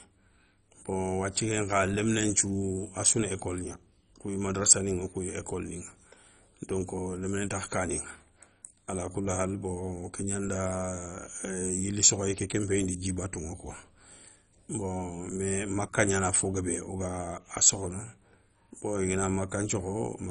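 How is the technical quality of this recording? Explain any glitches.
The speech sounds dull and gurgly from start to finish, with nothing above about 10.3 kHz and a granular, watery distortion under the speech as upper frequency bands flicker in and out. That points to MP2 compression, likely at a very low bitrate around 32 kbps. The coder splits the signal into sub-bands and, starved of bits, switches whole upper bands off and quantises the remaining ones coarsely, which produces both the muffling and the grainy churn.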